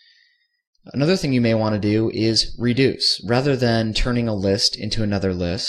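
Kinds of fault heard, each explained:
No faults heard.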